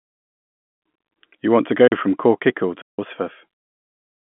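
At 1.88 s and again from 2.82 to 2.99 s the speech drops into a block of digital silence, about 43 ms and then 171 ms, probably because the output buffer wasn't filled in time. The lengths point to 2,048- and 8,192-sample blocks. Each one is a hard cut, heard first as a short hole and then as a longer, clear hole in the telephone-band audio.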